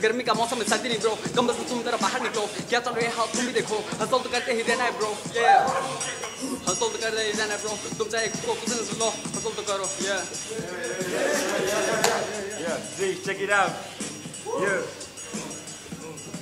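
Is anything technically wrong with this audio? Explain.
No, nothing technically wrong stands out here; it all sounds fine to me.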